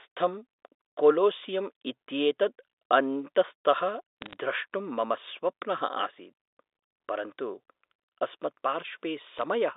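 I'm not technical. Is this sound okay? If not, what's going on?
No. Two short bursts of crackle come from bit errors on a digital phone line, between 4.22 and 4.36 s, just before "द्रष्टुं मम स्वप्नः", and again from 9.38 to 9.42 s. A small share of the line's digital bits got flipped, and each flip spoils a single sample; a flip on a high bit gives a sharp tick. Unlike a dropout, nothing goes missing: the speech carries on unchanged underneath the ticks, within the narrow telephone band.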